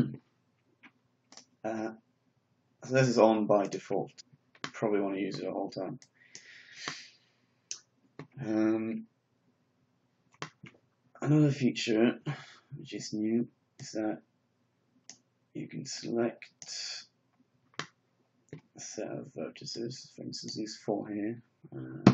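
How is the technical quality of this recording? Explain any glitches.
There is one glitch in the recording, a stream segment skipped at 4.19 s. The most likely cause is that one chunk of a segmented stream failed to arrive, so the player abandoned it and went straight on with the next one, leaving a gap in the programme. You hear the sound jump abruptly forward at that instant, with a brief blip where the two pieces of audio are butted together and continuity breaks.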